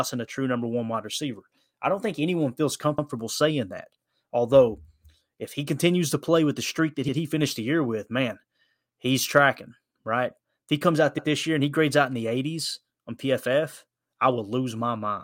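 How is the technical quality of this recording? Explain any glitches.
The recording has one recurring glitch: overlapping chunks, at 2.98, 7.08 and 11.18 s. The audio was processed in 4-second chunks, each starting about 100 ms before the previous one ended, so that slice plays twice. Each join gives a brief stutter: after "don't think anyone feels", after "with the streak that", and after "he comes out".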